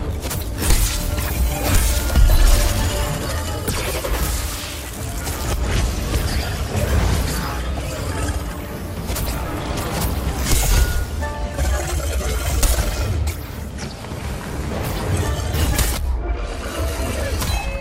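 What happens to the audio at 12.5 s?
Nothing goes wrong at 12.5 s; the audio plays through that moment intact, with no dropout, click, distortion or glitch.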